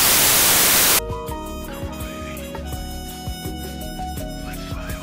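The first second or so of this audio, from 0.00 to 0.99 s, is wrecked by samples built from the wrong bytes. The reader is stitching each sample's bytes together incorrectly, whether by being a byte off, swapping their order or assuming the wrong alignment, so the quick-changing low bits end up as the big part of every value. You hear that as loud, harsh broadband noise in place of the actual sound until just under a second in.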